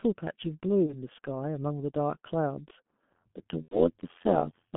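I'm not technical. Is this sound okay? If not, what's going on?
No. The whole clip has passed through the G.723.1 codec, an early internet-phone speech coder. It keeps only a narrow telephone band, roughly 150 Hz to 3.4 kHz, and models the voice coarsely, so the speech sounds muffled and hoarse, with smeared consonants.

There are two dropouts from VoIP packet loss concealed by the speech codec, at 0.86 to 0.97 s and 3.62 to 3.80 s. One 30 ms chunk is missing in the first and three in the second. The decoder fills each gap by guessing from the last sound, giving a buzzy, fading smear that lingers briefly after.

From 3.12 s to the end there is overlap-add ripple. The audio was rebuilt from short overlapping slices that don't blend evenly, so the loudness pulses about a hundred times per second, producing a metallic buzz with extra tones over the speech.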